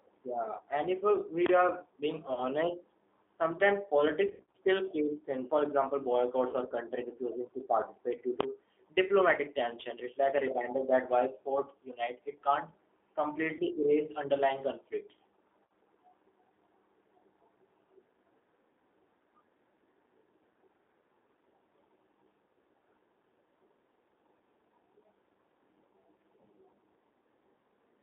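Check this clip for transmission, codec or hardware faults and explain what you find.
Three kinds of fault are present: narrowband codec damage throughout, six brief dropouts from lost VoIP packets, and one full-scale burst.

G.729 codec, throughout: The speech is thin and boxy, with a rough, slightly synthetic texture. The audible band runs only from about 250 Hz to 3.6 kHz, which fits G.729A at 8 kbit/s. This codec rebuilds speech from a vocal tract filter, a pitch estimate and a few pulses per frame, so fine detail is replaced by this coarse approximation.

VoIP packet loss concealed by the speech codec, at 0.57 to 0.61 s (just before "and if uh"), 2.33 to 2.45 s, 4.26 to 4.57 s (ending just before "creeps in"), 6.49 to 6.55 s, 13.55 to 13.62 s and 15.65 to 15.70 s: At each of these points the sound smears into a buzzy or hissy fading tone. Speech stays weak briefly after it resumes. 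The likely cause is lost packets, which the decoder covers by repeating its last pitch and filter while turning the level down. The other gaps amount to roughly 20 to 60 ms each. The 4.26 s event is the longest, with about 180 ms missing in scattered runs of up to 80 ms across 280 ms.

Invalid numbers at full scale, 8.41 to 8.43 s, between "refusing to participate due" and "diplomatic tension": A single loud bang sits here. Its 23 ms length fits a 1024-sample block. A calculation produced infinite or invalid values, and these were clamped to maximum amplitude for that whole block.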